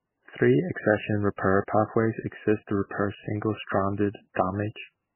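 From start to finish the speech carries heavy MP3 compression damage, likely from an encoder starved of bits, which fits a very low rate of around 10 kbps. Nothing survives above 3 kHz, so sibilants lose their hiss and the sound turns dull. What separates this from a simple low-pass filter is the watery, swirling texture: weak frequency lines drop in and out from frame to frame, leaving chirpy, metallic fragments and smeared consonant attacks.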